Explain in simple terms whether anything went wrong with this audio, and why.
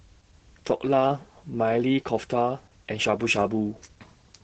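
Heavy Opus voice compression runs throughout: squeezed hard to save data, the speech sounds muffled, hoarse and slightly robotic, with its crisp top end cut off.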